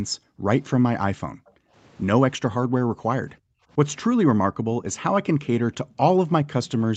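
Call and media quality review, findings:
Background gated by the echo canceller. Room tone dips or drops out at 0.18–0.47 s, 1.26–1.74 s, 2.78–3.02 s, 3.33–3.71 s, 4.48–4.73 s and 5.83–5.97 s. Depth is about 13 to 40 dB. The echo canceller's suppressor clamps the mic during far-end playback and then releases.

Echo leak. A faint delayed repeat of the speech is heard at 1.46–1.51 s and 4.86–4.95 s. It lags about 0.32 s and sits roughly 40 dB and 30 dB below the speech. Likely loudspeaker pickup that the far-end echo canceller did not remove.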